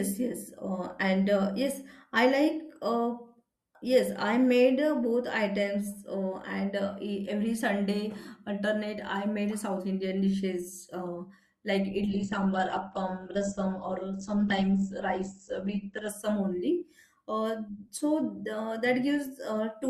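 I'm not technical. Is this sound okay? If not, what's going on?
No. From 12.09 to 16.09 s, just after "dishes uh like", an adaptive stream at a lower bitrate makes the speech suddenly dull and artificial, without the silence a dropout would leave.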